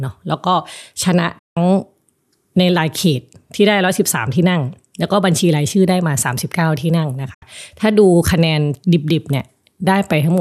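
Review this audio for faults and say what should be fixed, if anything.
Two digital broadcast dropouts interrupt the speech, at 1.39 to 1.57 s and 7.34 to 7.43 s: the receiver muted on bad frames with a quick 8 ms fade, so unlike a click or splice, the sound fades to silence and resumes later, the intervening material gone. Stronger reception or a cleaner feed, with more error-correction margin, would prevent it.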